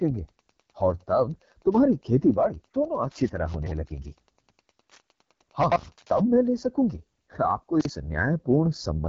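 The speech runs throughout through the AMR wideband (HD Voice) codec at 8.85 kbit/s, one of its two lowest rates. At that rate the pulse-driven vocal tract model has too few bits to follow the voice closely. The result is a rough, raspy texture that stays plainly audible. The band above 6.4 kHz is filled with shaped noise rather than real detail, and nothing at all reaches past about 7.5 kHz.

Three times, a chunk of audio arrives late and is played after the chunks that should follow it. Each chunk is about 43 ms long. The first is at 3.54 to 3.71 s, where the chunk lands roughly three chunks late. The second is at 5.63 to 5.76 s, about two chunks late, and the third is at 7.81 to 7.89 s, one chunk late. In each case these chunks out of order leave a brief jumbled stretch with three hard joins.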